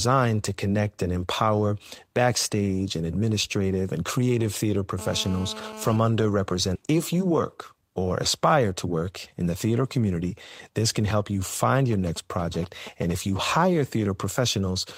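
A 2G mobile phone near the recording equipment is in an active call, and its radio transmits bursts about 217 times a second, which the audio circuitry rectifies into the signal. In this speech clip that appears as GSM phone buzz from 4.99 to 5.97 s, just after "administrative and creative theater": a steady, hard, raspy 217 Hz tone full of harmonics, about 14 dB below the speech and unrelated to it. Next, the receiving end discarded a stretch of audio while later packets were already queued, likely because its jitter buffer overflowed. The result is a skip ahead at 6.75 s, where playback jumps forward with no gap fill. Roughly a second of speech is gone, and the two sides are butted almost directly together. The jitter buffer then still held more audio than its target, so the receiver repeatedly cut out short pieces one or a few pitch periods long to reduce the delay. This jitter buffer speed-up runs from 6.87 to 8.07 s at 107% speed, removing roughly a tenth of a second. 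It recurs from 8.49 to 8.97 s at 111% speed, removing something like 70 ms, just before "in the theater community". In both stretches the talking sounds hurried while the pitch stays unchanged. Finally, the nearby phone sends only short groups of radio bursts. After "can help you find", from 11.93 to 13.12 s, these come through as GSM signalling bursts, a galloping dit-dit-dit of short 217 Hz buzzes around 15 dB below the speech.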